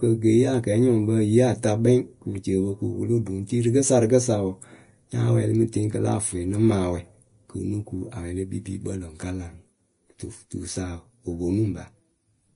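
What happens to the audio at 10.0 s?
At 10.0 s the speech sounds hissy and grainy, with nothing above 10.6 kHz, as throughout the clip; likely Vorbis compression, its coarsely quantised treble pointing to roughly 33 kbps.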